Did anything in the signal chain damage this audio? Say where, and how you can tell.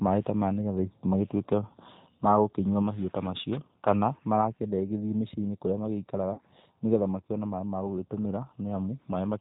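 Yes. Throughout, the speech is band-limited and slightly rough and synthetic, with nothing above 4 kHz. That is the G.729 codec at 8 kbit/s, stage codec: each 10 ms frame is rebuilt from a vocal tract filter, pitch predictor and a few pulses, and the damage is plainly audible.

From 6.34 to 6.41 s, between "kũrĩa magĩikaraga" and "nĩgetha makĩone maaĩ", the speech is stretched into a fading buzzy tone or coloured noise. That is VoIP packet loss concealed by the speech codec, stage network: about 40 ms went missing, which fits two lost packets, and the decoder extrapolated from its last pitch and filter.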